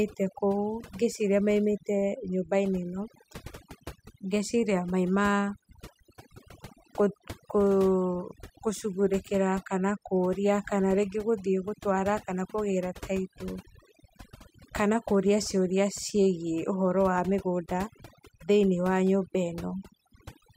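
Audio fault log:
Throughout: overdone noise removal. The noise reduction was pushed too hard, so bands near the noise estimate are cut right down, taking quiet parts of the speech with them. The gaps drop to near silence with twinkling specks. A spectrogram shows scattered isolated dots in the gaps and patchy, hollowed-out harmonics.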